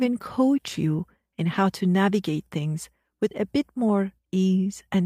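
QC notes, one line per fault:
No faults found in this speech.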